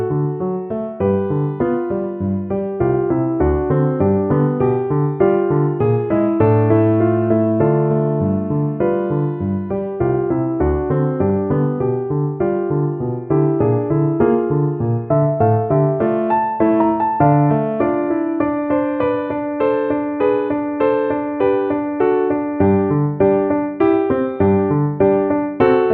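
The sound carries DAB burbling at 3.18 s. It is a brief patch of a few watery blips, as short noise appears in single sub-bands. Weak reception let bit errors slip past error correction into the MP2 data, corrupting samples. This fits a few damaged frames at a low error rate.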